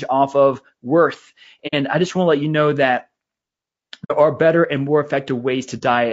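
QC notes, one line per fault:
Throughout: low-delay AAC compression. The speech sounds rough and grainy, with hiss between harmonics and a thin, synthetic top end, likely AAC-ELD squeezed to around 32 kbps.
1.67–1.74 s, 4.04–4.12 s, 5.78–5.82 s: AAC frame loss with muting. Short soft-edged holes come after "off of worth" and before "i just want to", then before "are better and more". The decoder zeroed missing frames, so overlapping windows fade out and back in. The 60, 60 and 30 ms gaps fit two, two and one lost frame.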